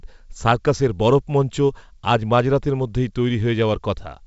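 The speech comes over G.722 wideband telephone coding at 64 kbit/s, with the band up to 7 kHz intact and at most a faint trace of the coding in the upper band, and no technical fault can be heard anywhere in it.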